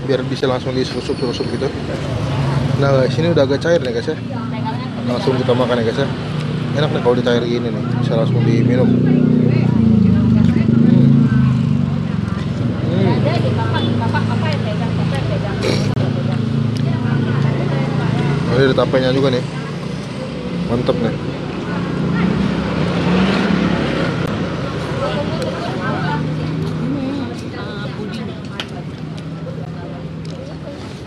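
The output buffer was likely not filled in time, so blocks of samples were replaced with zeros. Each block of digital silence cuts in and out with no fade. This happens four times. At 0.41 s and 29.65 s the gap is about 11.6 ms, which fits a 512-sample buffer, and is heard as a tick. At 24.26 s it lasts about 15.8 ms. From 15.94 to 15.96 s it runs about 25.8 ms, long enough to register as a brief hole.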